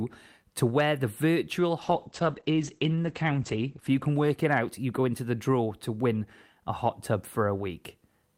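At 1.83 s, after "to where the virtual", a call bitrate drop makes the speech watery and muffled, which fits the encoder falling from 64 to 10 kbps. Bandwidth narrows from 20 kHz to 8 kHz, worst for 1.71 s, recovering by 5.61 s, before "to win a hot".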